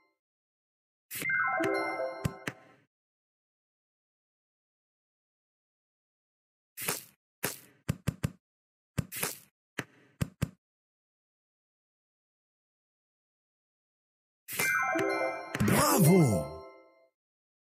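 No technical faults can be heard anywhere in the clip. There is nothing to mark at any point in the sound.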